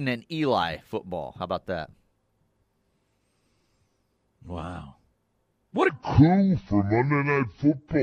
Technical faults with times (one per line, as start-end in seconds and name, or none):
5.89-8.03 section at the wrong speed